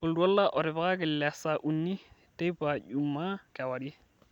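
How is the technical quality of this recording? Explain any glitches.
No technical faults are audible.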